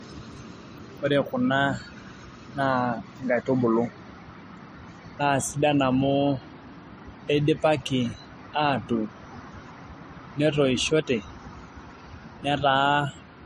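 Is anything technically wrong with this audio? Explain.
Yes. Throughout the speech, content stops at 15.2 kHz, and smeared, swirly high-frequency artefacts of two different characters sit on top of each other. This likely comes from transcoding between lossy codecs: a low-bitrate MP3 re-encoded to Vorbis, each codec adding its own damage.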